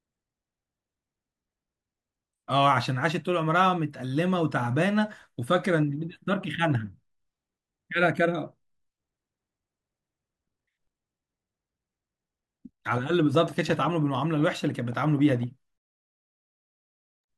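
A speech clip with a train of clicks from 12.99 to 15.44 s: about twenty similar sharp pops at roughly 8.6 per second, unevenly spaced, reaching about the level of the speech and audible through pauses too. On a waveform they show as thin spikes standing out from the envelope; on a spectrogram, as narrow vertical lines spanning the whole frequency range. The likely cause is interference from nearby equipment or a faulty connection or power supply.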